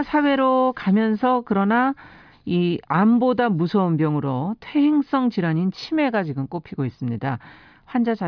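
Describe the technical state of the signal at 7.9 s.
Around 7.9 s the speech signal is intact, with no audible technical fault at that moment.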